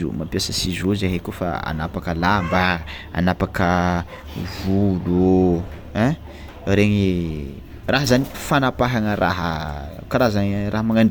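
No technical faults can be heard anywhere in this recording.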